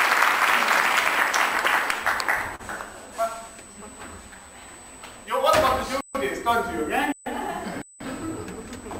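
Right from the start there's a steady USB whine, a fixed high tone at 8 kHz sitting roughly 25 dB under the signal. That pitch matches the bus's 125-microsecond microframe rate, so current draw on the USB line is leaking into the audio through power or ground.

At 2.55 to 2.62 s there's a short concealed packet loss. About 40 ms of audio never made it to the decoder in time, and the receiver papered over roughly 35 ms by extending the last sound, so you hear a quick smear before it blends back in.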